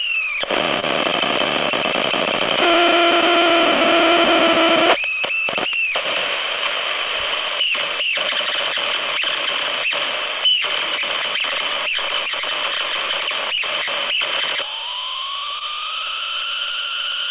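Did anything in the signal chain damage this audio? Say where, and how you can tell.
Yes, network-side short concealed packet loss: brief smears at 0.80, 5.84 and 15.59 s, each about 20 ms the receiver papered over by extending the preceding sound, inside an audio band that stops at 4 kHz.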